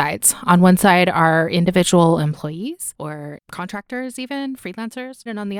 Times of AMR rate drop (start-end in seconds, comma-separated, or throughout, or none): none